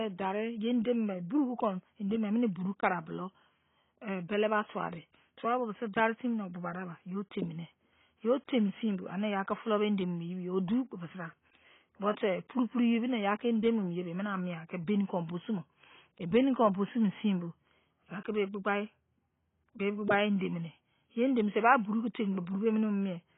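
The speech was most likely squeezed through AAC compression at a very low bitrate, with the AAC-LC encoder too starved of bits to code the whole spectrum. The heavy damage points to a stream around 16 kbps. To save data the encoder drops everything above about 3.8 kHz, so the whole clip sounds dull and muffled. The coarsely quantised bands that remain give sibilants and held sounds a smeared, warbling, fizzy texture.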